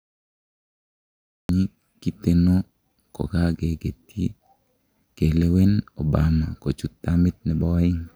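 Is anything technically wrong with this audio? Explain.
Yes, there is a cut-off start. The first 1.49 s are digital silence, and the speech then begins abruptly at 1.49 s in the middle of a sound, with no natural attack or fade-in. This happens when capture or streaming starts after the talker has already begun, so the opening of the utterance is lost. Unlike a dropout, the gap occurs only at the very start and the audio continues uninterrupted afterwards.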